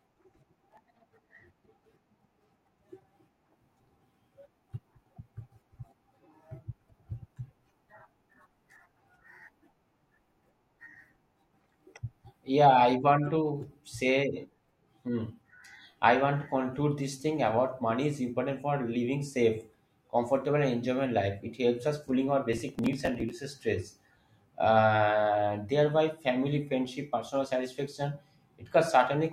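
Processor overload crackle at 0.70–0.90 s and 22.53–23.31 s: missed few-millisecond buffers skip audio, producing gritty tearing, seen as vertical broadband streaks and waveform gaps.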